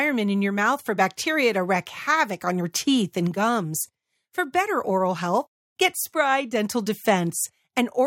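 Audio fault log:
No faults heard.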